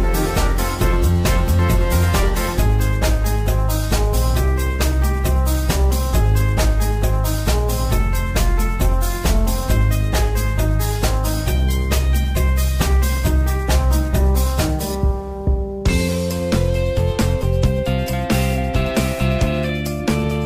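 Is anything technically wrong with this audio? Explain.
No, nothing technically wrong stands out here; it all sounds just as it should the whole way through.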